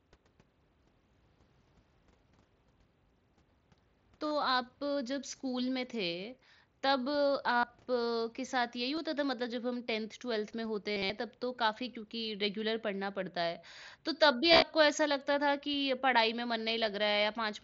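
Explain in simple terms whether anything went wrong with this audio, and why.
Yes: concealed Bluetooth headset packet loss, where dropped headset packets were patched by repeating recent sound, giving brief buzzy, steady-level stretches rather than silent gaps, at 4.26–4.31, 7.56–7.64, 8.96, 10.92–11.10 and 14.52–14.62 s.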